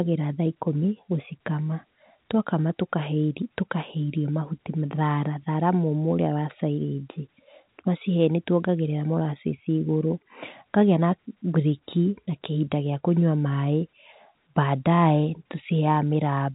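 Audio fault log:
Nothing stood out on listening to this speech, which carries the narrow telephone band of G.711 coding.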